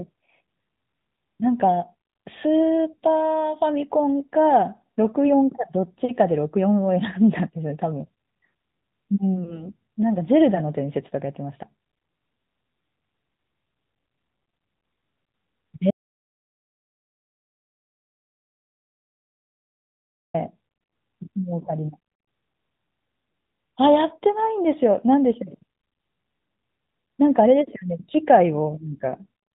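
Throughout, the speech passes through the AMR narrowband mobile codec, which cuts everything above 4 kHz and models the voice coarsely, giving a buzzy, synthetic tone that fits a 10.2 kbps mode.

At 9.44 s a lost AMR speech frame, apparently a single 20 ms frame, forces the decoder to repeat the previous settings at reduced gain, producing a brief dip or warble.

From 15.91 to 20.34 s comes an audio dropout to silence. The input was likely cut off while recording continued, leaving about 4.4 seconds of total silence with no room tone.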